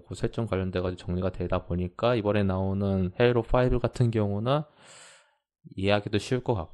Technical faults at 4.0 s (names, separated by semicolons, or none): none